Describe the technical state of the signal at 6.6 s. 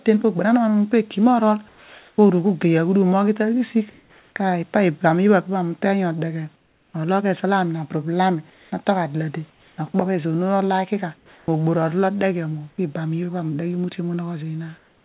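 At 6.6 s the room background drops out. From 6.56 to 6.94 s a steady, featureless hiss about 5 dB quieter takes its place. This is likely comfort noise in place of the background, synthesized by the receiver while the sender paused transmission.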